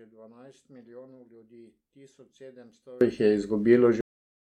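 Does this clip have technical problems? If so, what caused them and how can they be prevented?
Yes. From 0 to 3.01 s the speech is nearly gone, about 29 dB down, until "jih je". One channel inverted is the likely cause, cancelling the shared centre in mono. Check polarity on every channel before mixing.

At 4.01 s the speech stops mid-sound into digital silence. This is a cut-off end: the final buffers were never written. Flush and close the recording properly before stopping.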